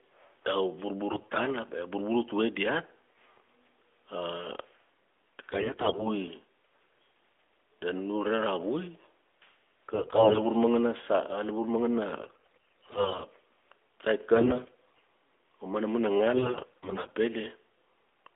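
The speech comes through an AMR-NB narrowband mobile codec at what sounds like 12.2 kbps, band-limited to about 300 Hz to 3.5 kHz. On top of that there are six bursts of AMR bit errors: 1.12 to 1.39 s, 5.50 to 6.08 s, 9.94 to 10.46 s, 12.22 to 13.25 s, 14.34 to 15.01 s, and 16.34 to 17.10 s.

In each burst the weakly protected bits of the frames got flipped while the core bits stayed intact. The excitation pulses land in the wrong spots and the fine pitch, gain and spectral values drift. Pitch and level roughly hold, but the voice goes hoarse, scratchy and gargly. The damage is roughest in the third and fourth bursts, where the error rate is around a fifth of bits rather than the 7 to 15 percent of the others.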